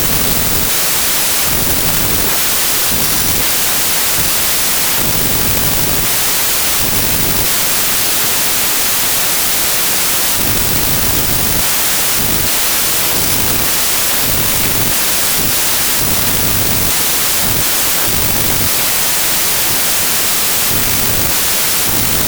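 Throughout, a wrong sample width garbles the speech. Packed 24-bit data is read as 32-bit, mixing bytes into loud noise. The buried speech plays 1.33 times fast, pitched up.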